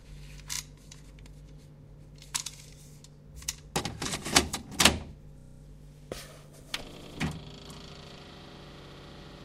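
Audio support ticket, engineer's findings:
Repeated frames: stutters at 0.53, 5.39, 6.96 and 8.82 s. Block repeats about 32 ms (x2, x7), 96 ms (x2) and 64 ms (x4), pointing to one to three frames re-sent or re-written upstream of the decoder, adding 64 to 256 ms each.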